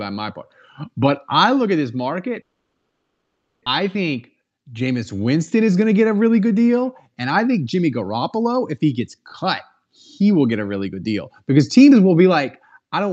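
From 2.41 to 3.68 s, a long network dropout likely stopped packets from arriving, so the receiver had to invent about 1.25 s of audio to cover the gap. The speech dissolves into a buzzy continuation of its last sound that fades away, leaving only a brief silence before the voice returns. Around a second of speech is simply gone, and the playout delay grew by roughly a fifth of a second.

Jitter buffer speed-up follows twice. The receiver's buffer then held more audio than its target, so it trimmed tiny pitch-period slices repeatedly to drain the excess, about a tenth of a second in each episode. From 3.80 to 4.88 s the speech runs at 108% speed, and from 5.61 to 6.69 s at 110%. The pitch stays put, but delivery sounds rushed. All of this reaches the listener through the Opus call path, whose 8 kHz bandwidth leaves the highs dull.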